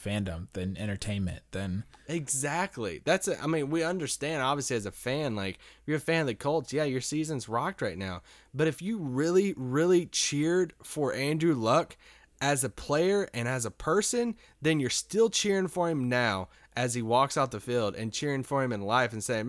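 No technical faults can be heard anywhere in the recording.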